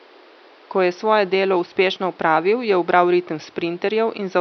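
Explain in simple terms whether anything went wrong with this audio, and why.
Nothing went wrong here.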